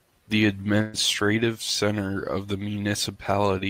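At 0.81 s the speech breaks for about 120 ms, to 0.95 s, in a burst of packet loss. Several consecutive packets never arrived in time, so the receiver kept extending the last sound it had and let it fade rather than leaving a gap. No silence is heard, which separates this from a plain dropout. Speech then resumes further along, with that stretch of speech gone and not merely delayed.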